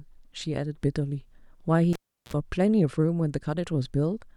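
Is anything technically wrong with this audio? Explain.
Yes. At 1.93 s a pop mutes the speech for 355 ms, then 60 Hz hum and another pop at 2.33 s: a cable pulled and plugged in.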